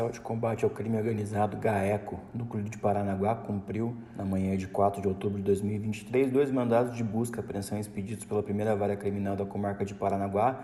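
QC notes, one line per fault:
Nothing stood out on listening.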